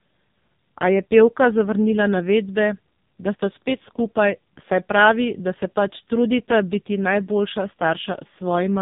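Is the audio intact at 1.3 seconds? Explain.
No. At 1.3 seconds, as across the whole clip, the speech has passed through the AMR narrowband mobile codec at a heavily damaging setting. The sound points to one of its lowest modes, around 5.15 kbps, where each 5 ms gets only a few excitation pulses to drive a vocal-tract model. Nothing above about 3.8 kHz survives, so the voice is muffled and boxy. The sparse pulses make it buzzy and synthetic.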